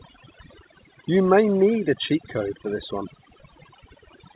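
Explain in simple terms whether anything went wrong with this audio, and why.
Overdone noise removal was applied too strongly across the whole clip, wiping out background noise along with quiet parts of the speech. The background drops and breaks up into twinkling specks. The call line also cuts off everything above 4 kHz.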